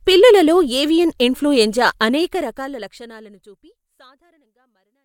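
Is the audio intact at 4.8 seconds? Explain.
Yes, the audio is intact at 4.8 seconds, where the speech is simply quieter because it sits inside the smooth fade-out that takes the level down to the end of the clip, with no click or hard edge.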